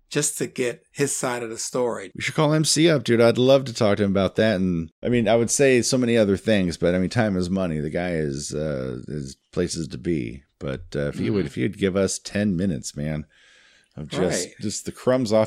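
No technical faults are audible anywhere in the speech.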